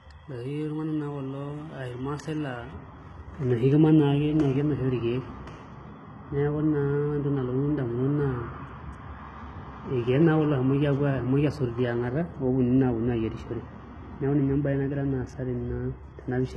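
From the start, the speech has treble that sounds synthetic: sibilants come out gritty and lispy, and nothing reaches above 11.8 kHz. The likely cause is heavy HE-AAC compression at a rate that fits roughly 16 kbps. Unlike a plain low-pass, the upper band is still present, rebuilt from copied lower bands whose harmonics don't align.

From 2.73 s to the end, de-emphasis applied wrongly dulls and muffles the sound further. The response tilts gradually downward, reaching about 11 dB less at 10 kHz than at 1 kHz. That smooth slope, rather than an abrupt cut-off, sets it apart from band-limiting.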